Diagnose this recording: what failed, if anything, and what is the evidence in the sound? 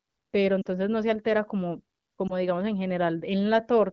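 Network stage: lost AMR speech frames. A drop toward near silence at 0.61 s and a brief dip at 2.27 s. The decoder repeated the last good settings with falling gain.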